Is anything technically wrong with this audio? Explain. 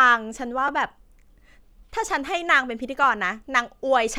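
Yes, the speech has two repeated-buffer faults, at 0.68 s and 3.04 s. Fresh audio reached the output late, so the device replayed its last block of about 5.8 ms, which fits a 256-sample buffer: twice more at 0.68 s and once more at 3.04 s. With blocks this short the repeats sound like a tiny click or brief buzz rather than a stutter. Unlike a dropout, nothing goes silent and no audio seems missing; the sound is repeated, with hard joins.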